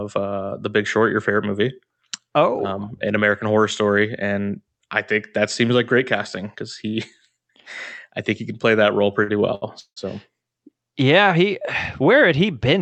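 Speech carried over an Opus call path, band-limited at 8 kHz with coding noise consistent with about 48 kbps, shows three timing faults close together. A short stall from a late packet comes first at 9.23 to 9.30 s, just after "can play that role", and a second at 9.55 to 9.64 s. Each time a packet missed its slot, the jitter buffer ran dry and the receiver stretched the last sound, by 48 ms and then 70 ms, before resuming where it left off. Nothing is lost, but the sound is held too long and everything after it is pushed later. A call audio freeze follows at 9.80 to 9.98 s. The receiver carries the last sound on as a fading buzz or hiss that reaches silence for about 90 ms of the 163 ms filled, then the audio picks up from where it stopped. This is likely packets held up in transit draining the jitter buffer completely. The result is an inserted gap rather than missing material.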